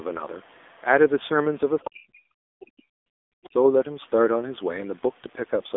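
AMR narrowband mobile codec runs through the whole clip. The speech is reduced to a pulse-driven vocal-tract model in 20 ms frames, and nothing passes above 3.7 kHz. The plainly buzzy, synthetic quality points to a low mode around 7.4 kbps.

Speech suppressed in double talk occurs from 1.89 to 3.55 s, with about 1.5 s affected in all. The talker's level falls in chunks, by as much as roughly 40 dB at the deepest. The likely cause is an echo canceller attenuating everything while both sides spoke.

The other side's voice is leaking through at 2.62 to 2.66 s, roughly 25 dB below the speech, and again at 3.44 to 3.49 s, roughly 30 dB below. Both are brief, faint scraps of a second voice, likely loudspeaker echo that cancellation failed to remove.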